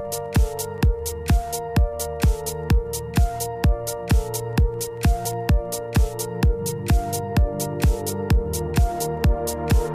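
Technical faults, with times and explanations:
No technical faults can be heard anywhere in this clip. There is nothing to flag at any point in the recording.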